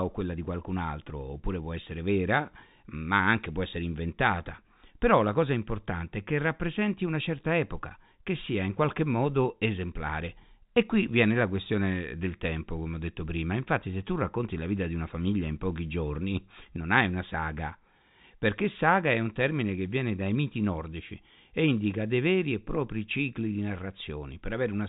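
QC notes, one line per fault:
No faults found in this speech clip. It carries G.711 telephone coding, so the band stops at about 3.8 kHz, as the 64 kbps mu-law telephone format requires.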